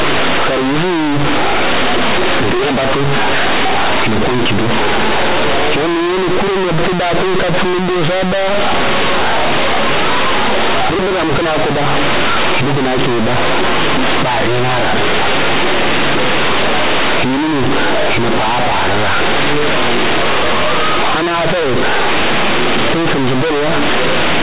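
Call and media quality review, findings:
Companded audio read as linear, whole clip: very loud, buzzy distortion with heavy noise in the pauses. The mu-law bytes are being played as plain 8-bit linear without expansion, so every sign flip swings half-scale and quiet speech hits as hard as loud speech.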